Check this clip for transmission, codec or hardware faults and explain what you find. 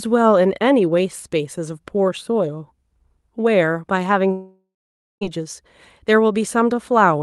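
There is one fault, heard over the Opus call audio, which is limited to 12 kHz. From 4.31 to 5.23 s a long network dropout is likely. The receiver stretches the last sound into a fading buzz, then leaves about half a second of silence.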